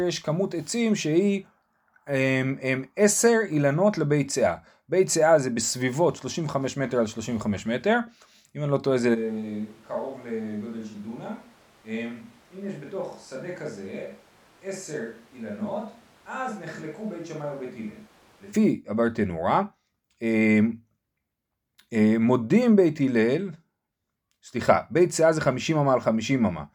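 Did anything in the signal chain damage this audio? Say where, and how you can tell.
Yes. From 9.16 s to 18.52 s the speech abruptly turns roomy and hollow, thins in the bass and drops about 10 dB over room noise some 25 dB down. This is a switch to a distant microphone at capture, likely after the close mic dropped out. A plain gain cut wouldn't add room reflections.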